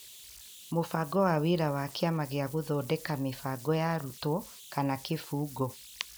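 Converter idle tones run throughout this speech: an undithered delta-sigma stage whistles near 3 kHz in pauses, with grainy noise about 21 dB below the speech.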